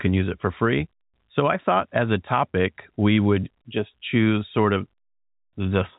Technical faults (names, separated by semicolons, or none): none